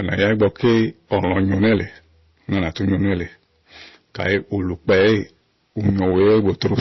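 Speech runs through the whole clip with hard clipping from start to finish. The level was pushed about 15 dB past what the signal path could carry. Every peak is sliced flat. A few percent of the samples were cut off at that limit. Those squared-off tops throw harmonics high into the spectrum. The result is a harsh, buzzing fuzz on each loud syllable, not an occasional crackle. The voice also sounds dull. Nothing is present above 5.8 kHz. The artefacts of different codecs are heard together. This mix is likely transcoding between lossy codecs. The sound fits a low-rate MP3 around 24 kbit/s followed by Opus near 48 kbit/s. The second encoder spends its bits reproducing the first one's damage and adds its own. The earlier, lower bandwidth limit survives the chain. So both sets of artefacts are heard together.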